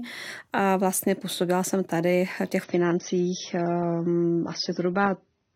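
At 2.64 s, after "jsem tady v těch", the adaptive stream drops to a lower bitrate, so the treble abruptly vanishes above 6.3 kHz, with no gap.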